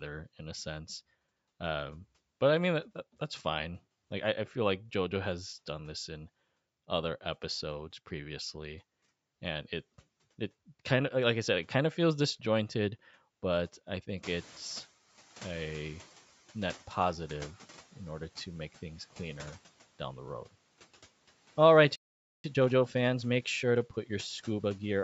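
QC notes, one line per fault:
14.23–14.96 s, noise suppressor catching up: The room noise jumps by about 19 dB near 14 s. The suppressor's noise estimate lags behind the jump. The noise first comes through with little reduction, then sinks by about 9 dB over 730 ms as the estimate adapts.
21.96–22.44 s, playback stall: The speech stops mid-flow and the output goes silent for 484 ms. The likely cause is the player running out of data or its thread being blocked. Sound resumes when playback recovers.
22.44–25.04 s, time-compressed catch-up: After the stall, the speech runs about 1.1 times faster at normal pitch. The player is shortening its backlog by cutting out small pieces and cross-fading over the joins.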